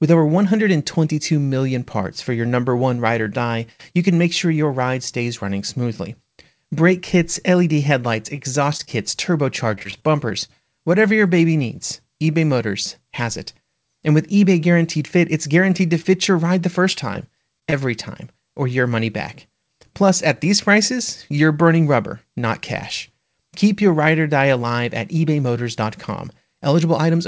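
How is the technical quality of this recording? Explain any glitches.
The recording is a call-quality speech capture with audible network glitches; nothing sounds above 8 kHz, which fits a wideband call codec such as G.722.

Short concealed packet loss occurs at 8.77–8.81 s, 8.85–8.89 s, and 16.02–16.06 s, between "it's guaranteed to" and "your ride the". Each time, about 20 ms never arrived. The decoder extended the preceding sound and crossfaded back, leaving a brief smear or wobble.

Repeated packet loss (robotic sound) occurs at 9.75–10.50 s, just before "whatever your baby needs", with seven gaps up to 22 ms. It recurs at 16.92–17.74 s, between "your ride the" and "time or your money", with four gaps up to 28 ms. The back-to-back concealment sounds choppy, with pieces missing.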